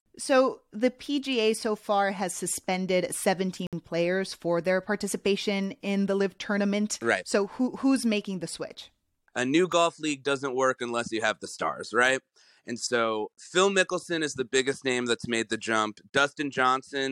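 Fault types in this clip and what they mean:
gap between stream segments: at 3.67 to 3.73 s, between "so far has suspended" and "players for their participation", and again at 9.72 s, just before "league doesn't work unless", the speech drops into hard-edged silence, about 60 ms the first time and only about 4 ms the second. Two adjoining segments' timestamps leave a small hole that the player fills with nothing. The two gaps are roughly 6 s apart, which fits 6-second segments, and no speech is lost.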